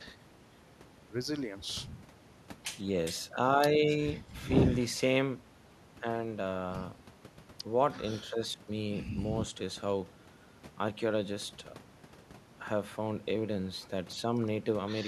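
No dropouts, clicks, clipping, or level jumps turn up anywhere in this speech recording.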